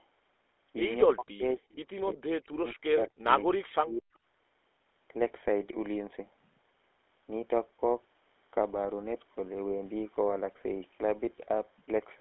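From start to finish, the speech carries GSM full-rate codec damage. The coder rebuilds each voice from a vocal-tract model driven by sparse pulses, which fits a 13 kbps stream. That gives a plainly buzzy, gravelly roughness. The line band runs from 300 Hz to 3.5 kHz.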